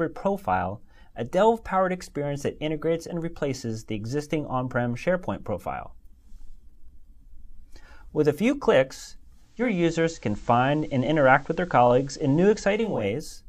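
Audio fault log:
9.35–13.14 s, digital radio blending to analogue: the receiver lost the digital stream and cross-faded over about 0.45 s to the station's FM broadcast, staying on it to 13.14 s. A faint hiss, roughly 35 dB below the signal, rises from the FM noise floor, and the level shifts by about 2 dB because the two chains are not matched.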